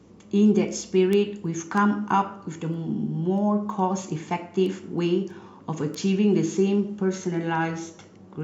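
Word clock ticks run through the speech from 0.17 s to 8.19 s. A steady train of around thirty sharp clicks recurs roughly every third of a second, some louder than others. The receiving device appears to be running on its own clock instead of locking to the digital link. With a drift of around 70 parts per million, the two clocks slip past each other at that regular rate. Each slip misreads a few samples and drops or repeats a single one.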